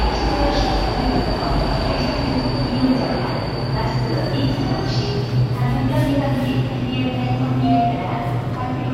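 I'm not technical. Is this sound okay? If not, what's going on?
Yes, this sound is okay; nothing here needs fixing.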